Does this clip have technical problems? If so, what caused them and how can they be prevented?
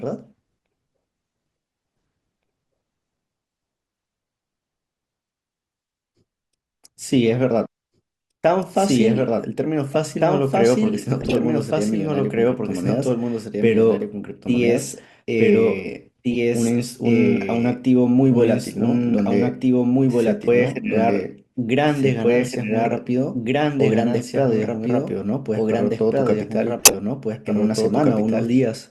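Yes. A doubled audio track runs throughout: a second, full-band copy of the speech at roughly the same level trails about two seconds behind. It has no decay or room colour, and is likely from the signal being captured twice or two out-of-step copies left in an edit. Route each source through only one capture path and check edits for stacked duplicates.

A corrupt frame decoded at 9.90–9.96 s, 11.21–11.35 s, 16.32–16.37 s and 26.78–26.94 s, each a short chirp or noise burst. Damaged compressed frames were played with misread gains and codes, spreading energy to wrong frequencies. The 11.21 s and 26.78 s bursts are longest and loudest, the latter being the strongest. Use error detection or checksums so damaged frames are concealed or dropped rather than decoded.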